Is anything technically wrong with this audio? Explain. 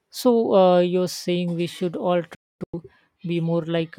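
Yes, there is a digital broadcast dropout from 2.35 to 2.74 s, right after "saying we should all". The receiver stopped getting decodable frames, which points to about eleven lost frames, and muted within about 3 ms each time, leaving silent holes across 384 ms, the longest 256 ms.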